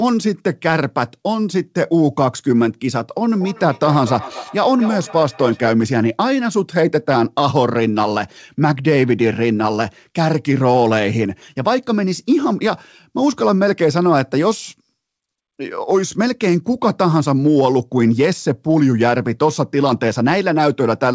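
A speech clip with a feedback echo between two devices from 3.33 to 5.78 s. Two devices sharing one call in the same room feed each other: one plays the other's microphone, that microphone hears it again, and neither echo canceller removes the other's output. Each word returns roughly every 200 ms, at most about 13 dB below the speech, thinner and more ringing each pass. On a waveform, fading copies trail each syllable at even spacing. On a spectrogram, repeated smeared bands sit below a ceiling near 8 kHz that fits the G.722 call codec.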